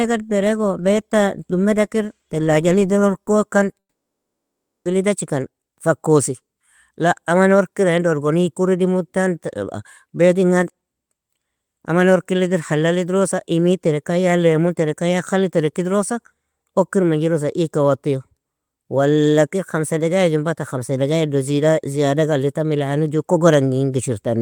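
Right after "idirr orkokan", from 3.79 to 4.87 s, the speech cuts out: a brief fading buzz, then about a second of silence, likely a long network dropout.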